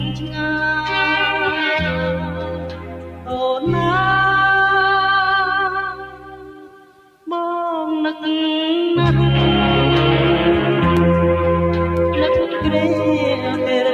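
A noise suppressor applied to music or sounds runs through the whole clip. Built for speech, it treats sustained tones and decaying tails as noise and pulls them down, so the level swings by around 10 dB and held material pumps and thins.

Sound cut by the noise suppressor shows most clearly from 0.0 to 0.49 s (deepest drop about 9 dB), 1.92 to 3.37 s and 5.91 to 7.27 s (each about 11 dB). The steadier parts sink and their decays are clipped short, while sharp onsets still come through.

Periodic USB or driver dropouts occur from 9.97 to 12.97 s, repeating once a second, about four in all. Each time, the bus or driver stalls and roughly a millisecond of audio is replaced with silence, heard as evenly spaced ticks over the signal.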